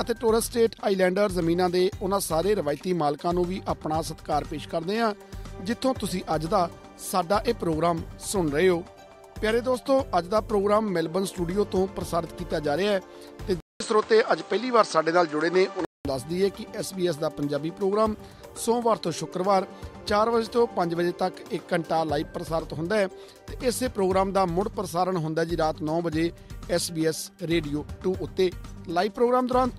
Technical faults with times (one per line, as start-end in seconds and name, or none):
13.60-16.05 input switched to a poorer device